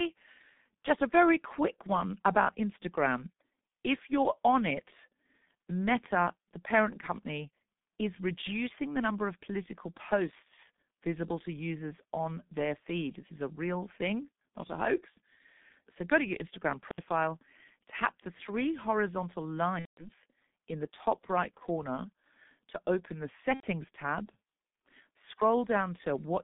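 From start to finish the speech carries the signature of the G.723.1 codec. The band runs only from about 150 Hz to 3.6 kHz, and the coder's slow-moving voice model, fed by 30 ms frames, smears consonants and leaves a hoarse, muffled grain. That points to a rate around 6 kbit/s. Unlike a simple telephone band-limit, which would only dull the top end, the damage here is heavy and textural.

At 19.79 to 20.10 s there is VoIP packet loss concealed by the speech codec. With packets missing, the decoder keeps repeating its last pitch and filter while stepping the gain down, so the voice stretches into a fading, synthetic sound across roughly 180 ms, which fits six lost 30 ms frames. A shorter instance follows at 23.54 to 23.68 s, about 90 ms long. Unlike a hard dropout, each gap starts with synthetic, decaying sound before the decoder mutes it from the third lost frame, and the voice stays weak briefly afterward.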